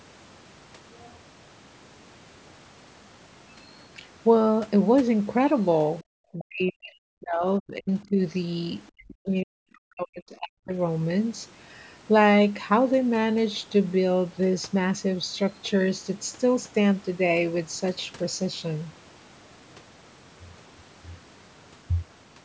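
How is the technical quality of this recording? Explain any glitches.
The recording has three clear glitches in the middle of the speech. The band stops at 8 kHz, as expected from call microphone processing. Between 6.32 and 7.44 s, 7.6 and 8.18 s, and 8.92 and 10.73 s the speech is chopped and ducked by up to about 40 dB. The likely cause is speech suppressed in double talk, where an echo canceller mistook the talker for loudspeaker echo while both sides spoke. On a waveform the envelope collapses in patches.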